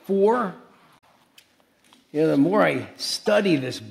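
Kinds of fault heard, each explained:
Damaged data in a compressed stream: two brief glitches break through the sound, one lasting about 90 ms from 0.95 to 1.04 s and a shorter one at 3.26 s. Some bytes in the encoded stream were lost, overwritten or mixed with foreign data, so the decoder misread the frames at those points, lost sync and hunted for the next valid frame header.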